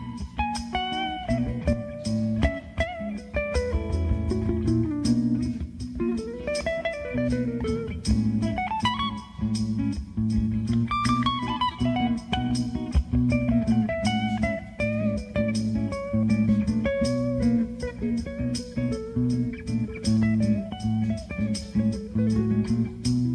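Nothing stood out as a technical problem on listening to this audio.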